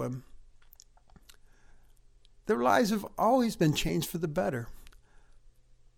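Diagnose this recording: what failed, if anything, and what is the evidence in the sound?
Codec stage: compressed frames skipped at 3.88 s, between "lives have always been" and "for the better". About one 23.2 ms frame goes missing, and overlap smears the join into a soft blip. A spectrogram shows a thin smudge with harmonics jumping; the waveform breaks without a spike.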